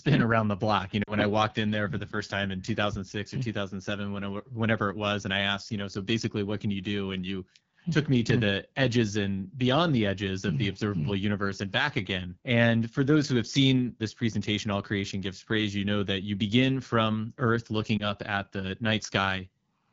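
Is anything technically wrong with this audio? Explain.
Yes. The call went through the AMR wideband (HD Voice) codec at 8.85 kbit/s, one of its lowest rates, where the speech model runs short of detail, leaving the speech audibly rough and raspy throughout.

Lost AMR speech frames occur from 1.04 to 1.13 s, a 40 ms gap that fits two lost frames, and from 17.98 to 18.08 s, a 20 ms gap that fits a single frame. The decoder patched over each gap by reusing the previous frame's settings at falling gain, so the speech briefly dips or warbles before recovering.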